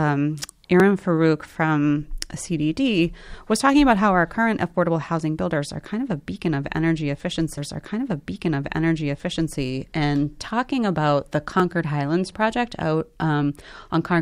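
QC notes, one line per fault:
0.80 s and 11.60 s, block of digital silence: the output drops out for 1.33 ms and then 0.94 ms, with no fade, so each is a single sharp tick rather than an audible hole. The first fits a 64-sample buffer left unfilled in time.
7.57 to 9.57 s, stream segment repeated: the same two seconds of speech were fetched or queued twice and play again, lengthening the programme by 2 s. A small blip marks the jump back at 7.57 s. Unlike a gap, nothing is lost; material is duplicated.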